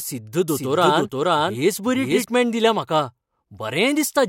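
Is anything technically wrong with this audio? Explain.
Yes. From 0.48 to 2.24 s there is a doubled audio track, likely from a second, slower capture path: a full-band copy of the speech, about as loud, trails roughly half a second behind, then cuts off abruptly.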